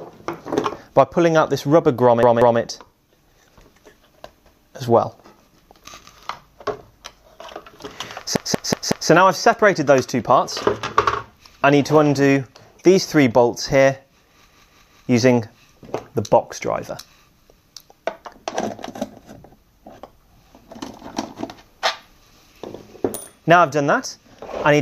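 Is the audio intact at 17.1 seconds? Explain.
Yes, the audio is intact at 17.1 seconds, with no fault present at that moment.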